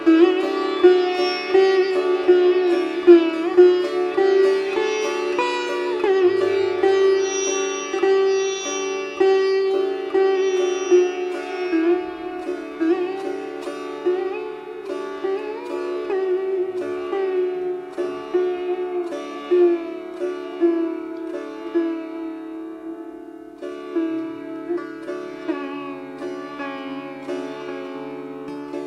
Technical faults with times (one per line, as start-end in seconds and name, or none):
none